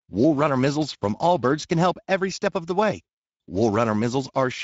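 From start to finish the speech sounds noisy and hoarse, with a rough, grainy edge that is plainly audible. This is Speex codec damage. Speex rebuilds speech from a vocal-tract filter driven by a coded excitation signal, and with too few bits for that excitation the fine structure of the voice is replaced by coarse, noisy approximations. The bitrate is roughly 17 kbps.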